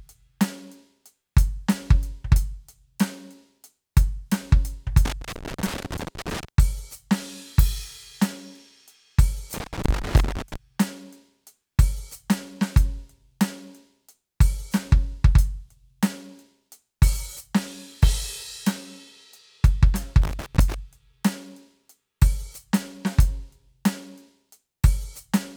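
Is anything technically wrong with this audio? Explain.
Yes. The music has loose connector crackle in three bursts: 5.05 to 6.48 s, 9.54 to 10.56 s, and 20.22 to 20.74 s. A worn or dirty contact in the signal path is making and breaking as it shifts. Each break chops the signal, and any DC on the line turns the jumps into pops. The result is ragged, irregular scratching over the music. The bursts last between about half a second and nearly one and a half seconds.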